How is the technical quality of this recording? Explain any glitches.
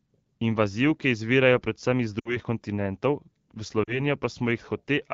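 The recording has two short dropouts caused by lost AMR speech frames. They sit on top of wideband AMR audio whose light coding is consistent with a rate near 12.65 kbit/s. The first gap runs from 2.19 to 2.37 s. The second runs from 3.84 to 4.02 s. Radio errors corrupted the frames, so the decoder reused the last good pitch and vocal tract settings at falling gain. The sound smears briefly, then fades. About 60 ms and 40 ms were lost, which fits three and two 20 ms frames.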